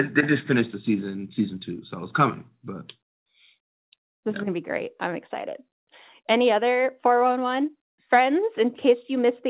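Speech carried over a call path coded as G.711 mu-law at 64 kbps, with nothing above 4 kHz as that codec's narrow band dictates; no faults present.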